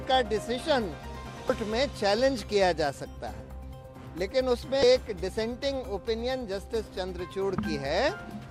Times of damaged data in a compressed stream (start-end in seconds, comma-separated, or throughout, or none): 1.47-1.50, 4.80-4.83